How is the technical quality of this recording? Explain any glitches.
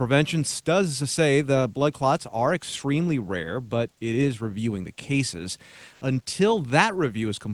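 The recording carries one brief glitch, on speech that has passed through a call codec whose top end stops near 12 kHz. From 5.93 to 6.01 s, just after "is reviewing the cases", comfort noise briefly takes the place of the background, for about 80 ms. The likely cause is discontinuous transmission in the Opus codec. The sender stops sending audio during a pause, and the receiver fills the gap with synthetic noise. The real background sits about 39 dB below the loud parts. The substitute is flat and featureless, and its level shifts by about 3 dB.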